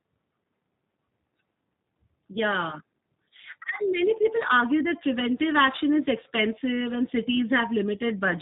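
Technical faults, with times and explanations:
Throughout: G.729 codec. The speech is resynthesised from a vocal-tract filter, pitch predictor and sparse pulses, which fits an 8 kbit/s G.729A stream, so it sounds plainly rough and synthetic. On a spectrogram, energy stops sharply at 4 kHz and the harmonics look smeared.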